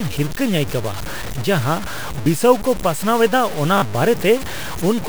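Throughout the speech, a grainy distortion follows the level of the sound, roughly 15 dB below it. The likely cause is low bit depth without dither, around 5 bits. Unlike steady hiss, it changes with the signal.

At 2.24 s, right after "ᱟᱹᱭᱠᱟᱹᱣᱟ ᱡᱟᱦᱟ", and again at 3.78 s, a repeated buffer replays the same slice with hard joins. The slice is heard one extra time at the first point and two extra times at the second, consistent with a 20 ms buffer. Each sounds like a short stutter rather than a constant grain.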